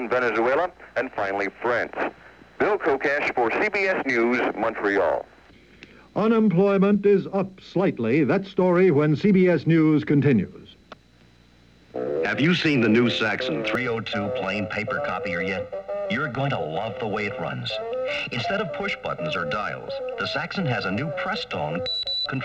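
From 13.75 s to the end at 22.45 s, the sound turns hollow and phasey: channel delay (comb filtering). One channel arrives roughly a millisecond and a half late, and when the two are summed to mono, shared content cancels at evenly spaced frequencies, the first near 300 Hz. Unlike flanging or phasing, these notches never sweep; they sit fixed. Unlike a simple low-pass dulling, the highs survive between the gaps.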